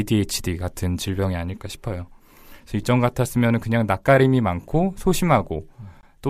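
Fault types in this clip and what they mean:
No faults turn up anywhere in this speech recording, so there's nothing here to flag.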